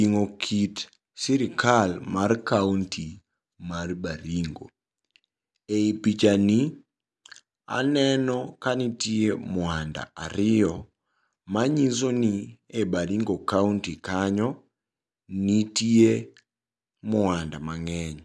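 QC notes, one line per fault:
Nothing to flag on this one; the speech comes through without any faults worth a QC line.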